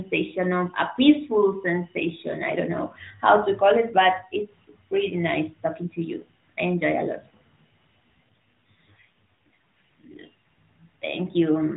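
Speech carried over an AMR narrowband mobile link, band-limited at 4 kHz, has an AMR rate drop from 8.31 to 10.22 s. The voice turns buzzier and more synthetic, consistent with the codec falling from 12.2 to 5.9 kbps. On a spectrogram the 4 kHz ceiling and continuous waveform remain, but harmonics smear.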